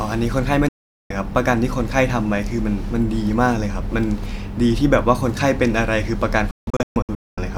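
A speech recording with two digital broadcast dropouts: the receiver lost valid frames and muted until clean ones arrived. From 0.68 to 1.11 s the sound snaps to silence with a fade of only about 3 ms, leaving a 416 ms hole. Between 6.51 and 7.38 s the loss is broken up, with 640 ms of muting scattered across several short gaps over 864 ms, the longest lasting 224 ms. Whatever was transmitted during those gaps is lost.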